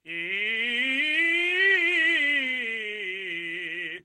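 No technical faults are audible.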